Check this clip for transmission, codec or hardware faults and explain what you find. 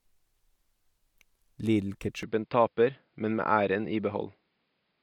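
One fault: from 2.23 s to the end, the speech turns dull and boxy, likely an input switched to a poorer device. On a spectrogram, energy above 5.1 kHz disappears at once; the waveform shows no gap, no level jump and only a faint new noise floor.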